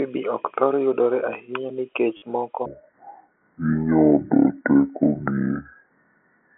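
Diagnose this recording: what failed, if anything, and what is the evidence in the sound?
The network stage dropped audio, and the receiver concealed the gap with packet loss with last packet repeated. From 2.17 to 2.22 s, 50 ms is missing, which fits five lost 10 ms packets. The decoder replayed the last good packet to fill the hole. The run sounds like a brief robotic stutter with a buzz near 100 Hz, the packet rate.

From 2.66 s to the end of the clip there is a section at the wrong speed, likely a playback or resampling stage running against the wrong clock. The audio is played at 0.597 times its original rate, so it is stretched in time and its pitch falls by roughly ten semitones. The speech turns deep and slow.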